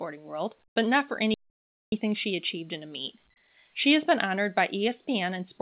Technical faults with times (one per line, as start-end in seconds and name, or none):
0.68-0.76 comfort noise in place of the background
1.34-1.92 playback stall